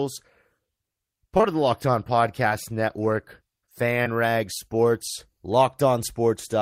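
Short concealed packet loss hits at 1.37 s and again straight after at 1.41 s, then at 2.49 s and 4.03 s, each about 20 ms of audio missing. The decoder extrapolated the preceding sound, heard as brief smears, drawn on a spectrogram as frozen, blurred harmonics before normal texture resumes.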